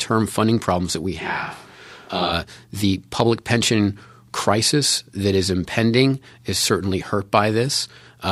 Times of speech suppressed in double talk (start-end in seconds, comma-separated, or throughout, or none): none